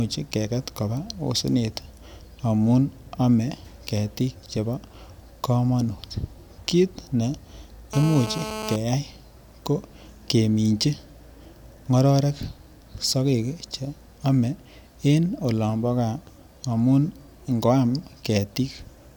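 From 7.93 to 8.76 s, GSM phone buzz: a nearby phone's 217 Hz call bursts are rectified into a steady, raspy buzz about 9 dB below the speech, harsher than mains hum.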